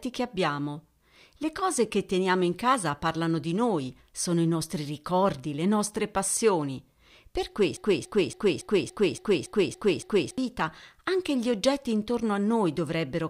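Speech recording with a broken-record loop from 7.77 to 10.38 s: a 282 ms fragment repeats exactly nine times, likely a stalled player or stream, showing as identical blocks tiling the spectrogram.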